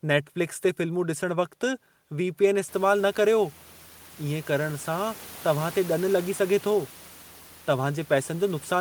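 Nothing stood out on listening to the speech, apart from background room noise that rises by about 23 dB at around 2.5 s and stays about 25 dB below the speech, which belongs to the recording space rather than to any fault.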